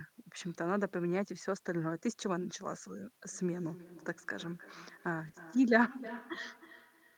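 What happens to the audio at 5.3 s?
Around 5.3 s the sound is already caught in feedback echo between two devices, running from 3.32 s to the end. A second device replays it, and its repeats come back roughly every 300 ms, at most about 14 dB below the speech.

At 5.27 s a lost packet is rebuilt from error correction. A low-bitrate copy fills the 20 ms without a gap, so that moment sounds rougher and noisier.

From 5.31 to 5.35 s there is a short concealed packet loss. The receiver extends the previous sound over 20 ms of missing audio, leaving a brief smear or wobble.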